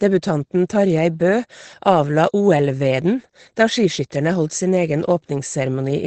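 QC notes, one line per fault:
throughout, Opus voice compression: the encoder runs at a very low rate, consistent with about 12 kbps in the SILK linear-prediction wideband mode. It discards everything above 8.7 kHz and codes the excitation coarsely, leaving the speech plainly muffled, hoarse and slightly robotic.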